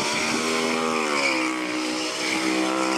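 The playback side has read the stream two samples at a time (double speed), treating each pair of samples as a single frame, which fits a reader expecting two channels or samples twice as wide as those actually present. The result runs throughout the clip at twice its proper speed and 12 semitones up, a full octave higher, so everything sounds rushed and high-pitched.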